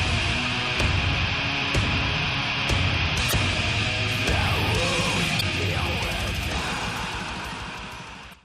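At 3.28–3.34 s, 5.37–5.43 s and 8.30–8.35 s, damaged data in the compressed stream makes the decoder lose frame sync, producing brief glitches in the sound.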